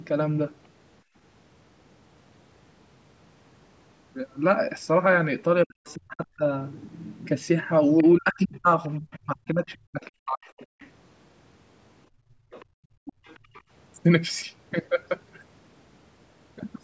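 At 1.03 to 1.15 s the room background is gated by the echo canceller, dipping about 20 dB for roughly 0.1 s, visible as a brief notch in the waveform's noise floor. From 5.65 to 6.44 s the talker is suppressed in double talk, likely the canceller clamping both sides, cutting the speech by up to about 40 dB in pieces across roughly 0.7 s. The spectrogram shows chopped gaps in the harmonics. Inside that stretch, at 5.86 to 5.94 s, a scrap of the other side's voice leaks through about 30 dB down, likely uncancelled loudspeaker echo. Both faults return from 7.98 to 10.9 s. The other side leaks about 25 dB below the talker, and from 8.02 to 10.68 s the talker's speech is suppressed in double talk, chopped by up to about 40 dB over roughly 2 s. Here the spectrogram shows a faint second harmonic pattern under broken bands. From 12.09 to 13.53 s the background is gated again, dropping about 19 dB for roughly 0.5 s in total. 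Echo leaks through from 12.51 to 13.62 s, and the talker is suppressed in double talk at 13.0 to 13.22 s.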